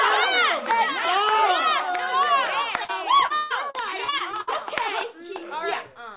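At 2.84 to 2.91 s, short concealed packet loss leaves a single smear where about 40 ms never arrived and was patched by extending the preceding sound, unlike the sustained choppiness that follows. From 3.26 to 4.49 s, repeated packet loss produces a choppy, robotic stretch: eight separate gaps, the longest 143 ms, are each bridged by continuation, so roughly a third of the span is synthetic filler rather than one isolated glitch. Throughout, nothing sounds above 4 kHz, which fits a narrowband G.711-style call path.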